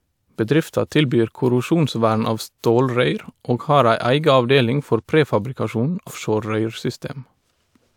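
At about 6.06 to 6.11 s the speech jumps forward: compressed frames were skipped, either missing from the stream or rejected by the decoder as damaged, so roughly 300 ms of audio never plays, which fits about seven frames of around 46 ms each. A spectrogram shows a seam where the speech patterns abruptly shift.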